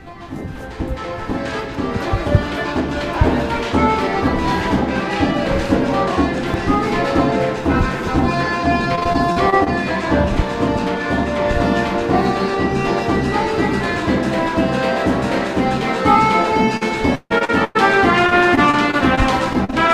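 Repeated packet loss (robotic sound) breaks up the audio three times: 8.95 to 9.68 s, 16.77 to 17.77 s, and 18.27 to 19.89 s. Chunks of audio went missing or arrived too late in quick succession, and each hole was patched by stretching the preceding sound. This gives a choppy stutter. The middle stretch is worst, with about a third of it patched and one gap near 150 ms. The other two are bursts of tiny dropouts.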